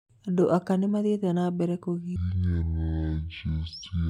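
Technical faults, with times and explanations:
2.16–4.09 s, section at the wrong speed: from 2.16 s right through to the end, the speech suddenly runs at half speed, so everything drags and drops to a deep, sluggish register, roughly ten semitones down. Pitch and pace fall together at the same instant, which is the giveaway. The likely cause is that this stretch was played back or rendered against the wrong clock, stretching each moment to twice its length.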